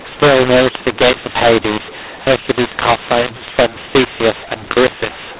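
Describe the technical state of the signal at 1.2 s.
At 1.2 s the speech is harsh and gritty, with levels jumping unevenly and the quiet gaps hissing instead of falling silent. This is a mu-law and A-law mix-up, present throughout: G.711 telephone audio coded as mu-law is being decoded as A-law, which scrambles the logarithmic level steps.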